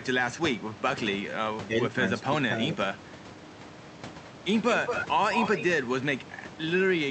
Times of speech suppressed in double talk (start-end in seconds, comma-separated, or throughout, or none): 1.67-1.78, 2.30-2.76